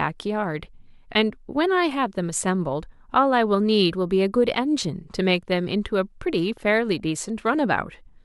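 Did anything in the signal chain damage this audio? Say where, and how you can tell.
No, no damage is audible.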